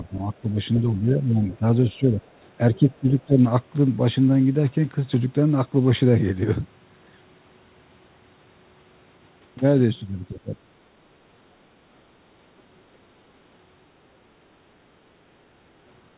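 From 0.11 to 2.2 s the talker's speech dips by roughly 10 dB, for about a second in total. This is speech suppressed in double talk. Both sides were likely talking at once. The echo canceller could not tell them apart and turned everything down. Later dips at 2.75 to 3.38 s and 10.34 to 10.68 s go deeper, around 20 dB.

Inside that first stretch, the other side's voice leaks through twice: 0.75 to 0.8 s and 1.44 to 1.56 s. These are faint scraps, roughly 20 dB and 30 dB below the speech. They likely come from the loudspeaker echo that the canceller failed to remove.

At 11.86 to 11.97 s and 12.56 to 12.67 s the room sound drops by about 12 dB and 9 dB, for about 0.1 s each. This is background gated by the echo canceller. It clamped the microphone while the loudspeaker played, then let go.

The call path has nothing above 4 kHz, which fits a narrowband G.711 codec.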